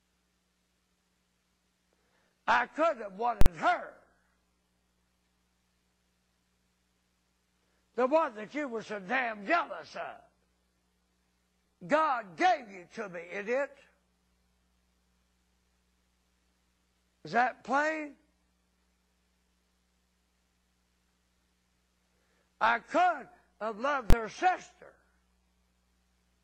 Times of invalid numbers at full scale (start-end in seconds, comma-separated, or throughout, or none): 3.41-3.46, 24.10-24.13